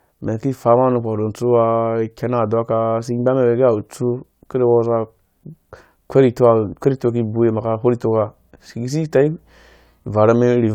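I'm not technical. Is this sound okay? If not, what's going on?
Yes, no technical faults turn up anywhere in this speech recording.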